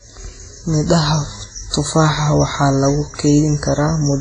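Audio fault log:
throughout WMA compression: likely a heavy transform encode, fitting about 24 kbps, smears quantisation noise and drops weak detail, so speech rings and washes, with nothing above 10.5 kHz.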